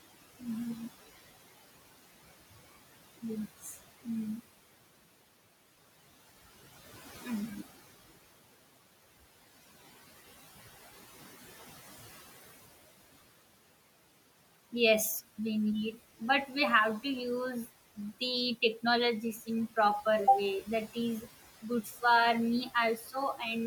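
Noise suppressor artifacts run through the whole clip: the suppressor pulls down the bands it judges to be steady room noise by about 16 dB, frame by frame. The room noise, which sits only about 16 dB below the speech, therefore drops away in the gaps and swells back under each phrase.

Speech cut by the noise suppressor occurs four times, at 3.61 to 3.78 s, 19.33 to 19.48 s just before "in proper", 21.83 to 22.03 s, and 22.97 to 23.14 s. Each time the suppressor mistakes a quiet stretch of speech for noise and turns it down with the background, by about 11 dB at the deepest in the first two, about 9 dB in the third and about 10 dB in the fourth. Each dip lasts a fraction of a second, and the soft sounds there come out swallowed and faint.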